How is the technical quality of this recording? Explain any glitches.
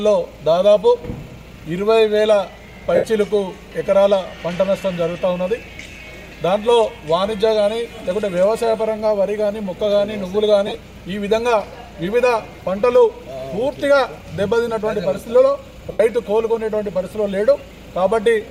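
The recording has four short dropouts from lost LE Audio frames, and light lossy compression is also present. The gaps fall at 2.95–3.04 s, 10.67–10.75 s, 15.91–16.00 s and 17.58–17.60 s. The first and third each cover about 82 ms of lost audio. The second is broken into short runs of roughly 15 ms scattered over 75 ms. The last is about 15 ms. These lengths fit 7.5 ms LC3 frames. The decoder conceals each gap by repeating the last spectrum with randomised phase signs, so tonal content briefly turns into a noisy smear. In the longer gaps that smear fades as concealment gives out.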